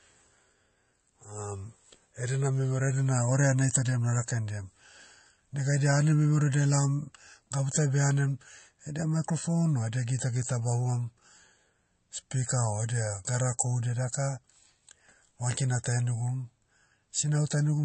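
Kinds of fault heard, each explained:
MP3 compression: Throughout the speech there's plainly audible codec damage, and nothing comes through above about 8.3 kHz, so the top end just stops at a hard ceiling. The likely cause is an MP3 encode at a low rate, something around 34 kbps, where the encoder ran short of bits, chopped the treble and dropped weaker frequency lines that flicker in and out between frames. That's what gives the speech its watery, swirly texture, and it makes s sounds chirpy and metallic.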